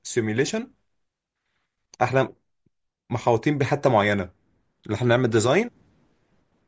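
No technical faults can be heard anywhere in the speech. Nothing in the recording calls for a timestamp or a closer look.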